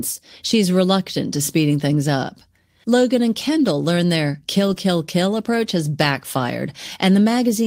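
A speech clip with two brief rough, noisy patches, at 3.47 to 3.49 s before "learn their" and 4.67 to 4.77 s before "kill approach has": lost packets rebuilt from error correction, where the decoder substituted low-bitrate redundant copies instead of leaving a gap.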